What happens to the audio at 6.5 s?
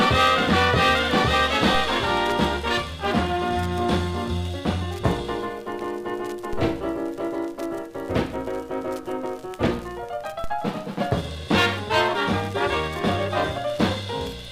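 A single low thump lands at 6.53 s while the sound carries on unchanged. It is a DC step: the waveform's zero line jumps by about -21 dBFS, and the offset then drains away slowly, as a 2 Hz high-pass would let it.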